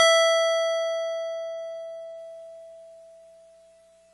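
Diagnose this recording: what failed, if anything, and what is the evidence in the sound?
The failure sits at the codec stage and runs through the whole music clip: the top end stops dead at 11.5 kHz, and the sound is dull and smeared, with a watery, fizzy texture on sustained tones. This is likely AAC compression, with AAC-LC starved of bits at a rate that fits about 32 kbps. It drops the high band and coarsely quantises what remains. A spectrogram would show a hard ceiling near 11.5 kHz, with patchy, holed energy below it.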